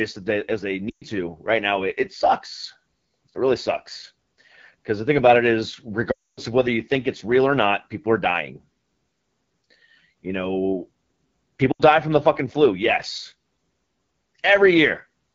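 Across the whole recording the speech carries the AMR wideband (HD Voice) codec at a plainly audible level. The rough, raspy texture points to one of its lowest modes, around 8.85 kbit/s. At that rate the pulse-driven vocal tract model has too few bits to follow the voice closely, and the band above 6.4 kHz is synthetic shaped noise rather than real detail.

Lost AMR speech frames first appear from 0.89 to 1.04 s, between "as they" and "to right now it". About 120 ms of audio is gone. The decoder repeats the last good pitch and vocal tract settings at falling gain, so the sound smears and sinks quickly, as wideband decoding does. The voice then returns briefly weak.

The longest gap runs from 6.11 to 6.40 s, after "thing about it is" and before "of whether you think". It is roughly 260 ms, long enough for the concealment to fade fully to silence before recovery.

A shorter loss at 11.71 to 11.82 s, about 80 ms, comes just before "from the fucking flu". 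The sound drops to near silence within two frames.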